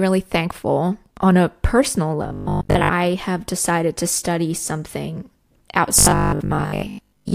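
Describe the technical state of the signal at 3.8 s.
The speech signal at 3.8 s is intact, with no technical fault present at that moment.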